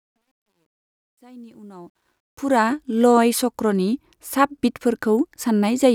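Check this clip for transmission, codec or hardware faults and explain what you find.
There's one clear problem, and it's on the fade-in at the start. From 0.0 to about 2.73 s the speech comes up through truncation distortion on a fade, worst from 0.0 to 1.53 s. Whatever applied the gain kept too few bits and added no dither, which fits roughly an 11-bit stage. At those low levels the waveform collapses into a few coarse steps, so the quiet opening sounds gritty. The fade itself rises up to 2.73 s.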